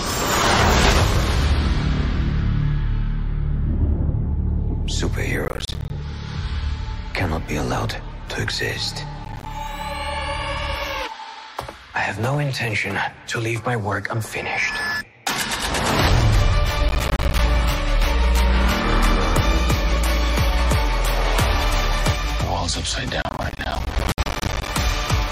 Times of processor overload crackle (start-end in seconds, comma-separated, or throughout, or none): 5.45-5.90, 9.25-9.46, 16.89-17.39, 23.22-24.68